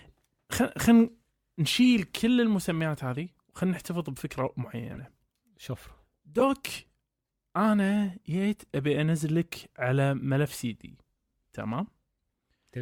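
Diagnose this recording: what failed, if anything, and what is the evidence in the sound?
Codec stage: corrupt frames decoded at 1.84 s, 4.93 to 4.99 s and 6.40 to 6.42 s. Damaged bitstream data put energy at wrong frequencies, heard as short chirps and bursts rather than the silences of dropped frames.

Processing stage: a sudden gain jump at 2.16 s drops speech and background noise together by about 5 dB until the end. The step is instant, not ramped like AGC, likely from an unsmoothed gain setting.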